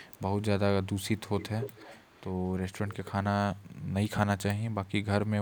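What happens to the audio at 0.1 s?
An echo leak runs from 0.03 to 0.21 s, covering the moment at 0.1 s. A faint delayed copy of the speech trails the original by 135 ms, sitting very low, roughly 35 dB beneath the direct signal. The likely cause is a far-end loudspeaker whose sound reached its microphone and slipped past an incomplete echo canceller, returning into the call.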